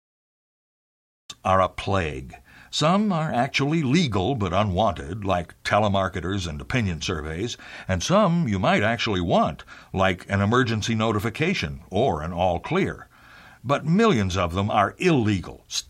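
The clip is speech with a cut-off start. It opens on digital silence from 0.00 to 1.30 s, and the audio then begins abruptly at 1.30 s partway through a sound, with no natural attack or fade-in leading into it. The missing onset means capture or streaming began late, after the talker had already started, so the first portion of that utterance was never recorded and cannot be recovered.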